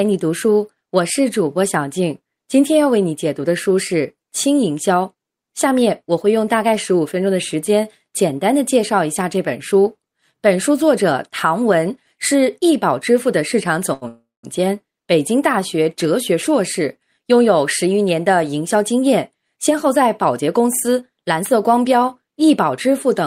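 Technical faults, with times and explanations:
13.93 to 14.05 s, short stall from a late packet: the sound is held too long for about 80 ms, with a slight buzz or dip, then continues from the same point with nothing lost. A packet arrived late, the jitter buffer ran dry, and the receiver stretched the last sound to bridge the wait, adding 81 ms of delay. Unlike a freeze, the hold is brief and never decays into silence.
14.08 to 14.46 s, call audio freeze: the audio stops moving forward for about 360 ms. The last sound is continued as a fading buzz that dies away to silence for the final 180 ms before the audio resumes exactly where it left off, so nothing is missing but a gap has been inserted. The likely cause is packets held up in transit emptying the jitter buffer again. What separates it from the stall just before is its length and the drop into silence.
18.76 to 21.74 s, jitter buffer speed-up: the speech runs about 7% fast over these three seconds, sounding slightly hurried while the pitch stays unchanged. 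The buffer was holding more audio than its target, so the receiver trimmed many tiny pitch-period slices, roughly a fifth of a second in all, to catch up. Because the pitch is preserved, this is not a sample-rate error, and nothing abrupt is cut out.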